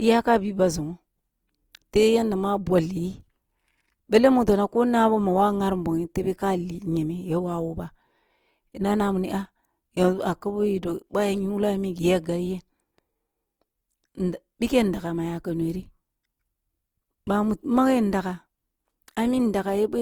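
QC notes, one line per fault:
Throughout, Opus compression. The speech sounds rough and grainy, and the detail turns noisy. The bands keep their energy but are filled with noise when bits run short. Bandwidth extends to 20.2 kHz. The likely cause is Opus music mode near 24 kbps.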